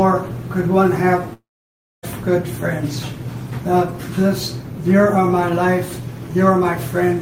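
From 1.33 s to 2.05 s the audio breaks off. The last sound carries on briefly as a decaying fill, then about 600 ms of silence follows before audio resumes with roughly 700 ms lost, the likely result of a long network dropout.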